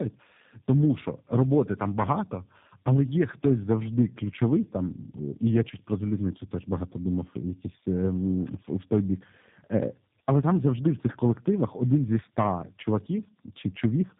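From the first second to the last, the speech carries tandem speech coding. It sounds like two low-rate speech coders in a row, with a plain telephone hop between them, ending in something that fits G.729A. The second coder works on the already mangled output of the first, so the roughness, muffling and warble pile up. Nothing comes through above 3.8 kHz, which accounts for the dull, boxed-in top end.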